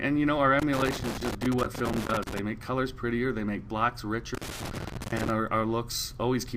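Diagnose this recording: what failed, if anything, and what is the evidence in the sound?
Analogue wiring: loose connector crackle from about 0.59 to 2.39 s and 4.35 to 5.30 s. A contact making and breaking chops the signal into irregular scratchy bursts.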